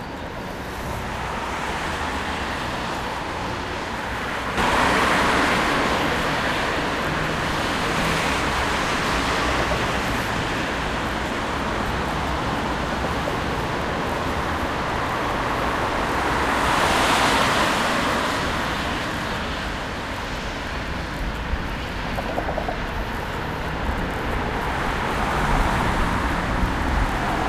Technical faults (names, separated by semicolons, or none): sudden gain jump